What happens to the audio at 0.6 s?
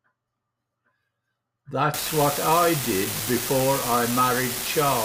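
Nothing goes wrong at 0.6 s; the speech continues intact through that moment with no dropout, click, glitch or other fault.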